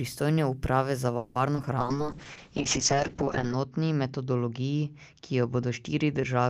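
A speech recording whose delivery breaks up through the middle. From 1.17 to 1.37 s, just after "uprave za", a call audio freeze stretches the last sound into a fading buzz for about 180 ms, likely because packets stalled and the jitter buffer ran dry. Unlike a dropout, nothing is lost: the sound resumes where it stopped, about 180 ms late. Then short concealed packet loss causes brief smears at 1.55–1.58 s and 1.62–1.65 s. Each gap is about 30 ms, too short for a stall, and the patched audio drops a little material rather than pausing. From 1.8 s to the end a call bitrate drop takes the encoding from 32 to 6 kbps for a sustained stretch, not a momentary glitch. The bandwidth narrows from 20 kHz to 8 kHz, so the sound turns muffled and rough, with the coarsest stretch lasting about 1.7 s.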